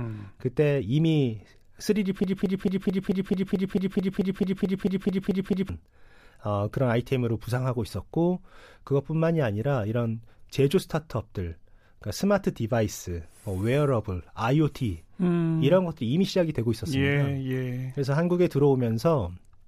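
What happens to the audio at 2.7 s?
At 2.7 s you're inside a broken-record loop running from 2.24 to 5.69 s: a 0.22 s fragment of the speech repeats exactly, back to back, 16 times. The player or stream likely stalled and kept replaying its last chunk, so the real audio there is lost.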